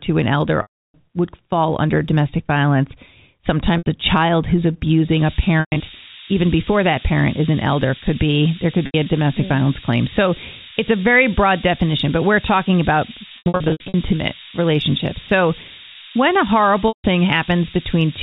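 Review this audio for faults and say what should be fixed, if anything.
Packets were lost in transit and the receiver bridged each gap by repeating the last pitch period, a process called packet loss with pitch repetition. Gaps fall at 0.62–0.94 s (320 ms, between "to an elder" and "would fall under domestic"), 3.78–3.86 s (80 ms, just before "a child who's"), 5.60–5.80 s, 8.86–8.94 s, 13.38–13.94 s and 16.88–17.04 s. The 80 ms losses sound like a briefly held, buzzy tone. The 320 ms gap fades to silence before the speech cross-fades back in. At 5.60 s and 13.38 s, losses of 160 ms and 380 ms are scattered over 200 ms and 560 ms. A jitter buffer with forward error correction or redundant packets on the network path would prevent this.

From 5.11 s, right after "a child who's", to the end, the signal is reduced to very few levels, which fits about 3 bits, with noise shaping pushing the rounding error upward. 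This is low bit depth with noise shaping. It is heard as a steady, thin hiss only roughly 10 dB under the speech. The hiss climbs sharply toward the top of the telephone band, which the G.711 coding cuts off at 4 kHz. Keeping at least 16 bits through every processing stage before the telephone encoder would prevent this.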